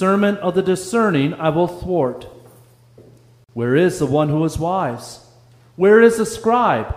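The clip is a short piece of audio with two technical faults. At 1.68 s a sharp snap sits on top of the sound. It is a tight burst lasting only a few milliseconds. This is likely an electrical switching spike, picked up from a nearby switch, motor or static discharge. At 3.44 s the sound drops out for about 46 ms and resumes at 3.49 s, carrying on where it stopped. The edges are smeared by the codec. This is a gap at a join of encoded pieces. Separately encoded sections were joined without trimming, so encoder start delay and end padding remain as silence.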